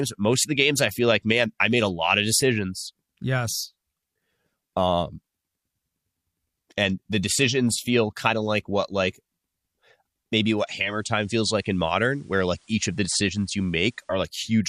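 At 10.68 s the receiver loses its digital stream and performs a digital radio blend to analogue FM, cross-fading over about 415 ms. Level drops about 2 dB, and faint hiss roughly 35 dB down appears until 14.31 s.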